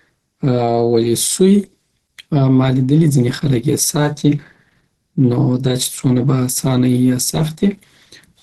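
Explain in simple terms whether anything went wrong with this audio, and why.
Throughout the clip, from start to finish, the speech sounds plainly muffled, hoarse and grainy, with a rough edge in place of clean detail, and nothing at all comes through above about 12 kHz. This is likely Opus compression. To squeeze the sound into very little data, the encoder switched to a mode built for speech that cuts off the highest sounds and roughly fills in the detail it can't afford to keep.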